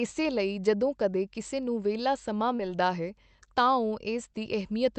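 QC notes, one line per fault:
2.55–2.61 s, short concealed packet loss: about 40 ms of audio arrived too late, and the receiver stretched the preceding sound to fill roughly 34 ms before blending back. The result is a brief smeared wobble rather than silence, unlike a hard dropout or click.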